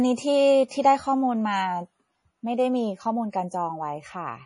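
Throughout the speech, heavy MP3 compression is audible: nothing survives above about 10.6 kHz, and the detail below that swirls and sounds watery. Weak frequency components drop in and out between frames, and attacks smear, likely from a starved bitrate around 32 kbps.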